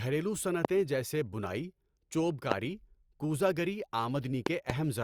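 A loud pop strikes at 0.65 to 0.67 s, and again at 2.52 to 2.54 s. Each peaks about 25 dB above the speech. From 4.46 to 4.72 s comes a pair of pops, about 20 dB up. Speech continues underneath. A likely cause is a voltage pulse from a plug, switch, static or driver glitch.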